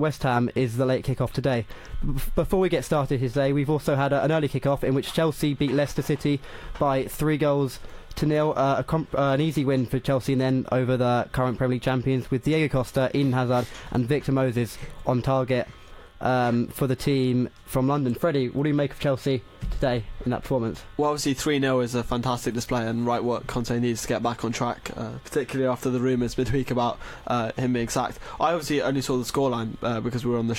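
No technical faults are audible anywhere in the recording.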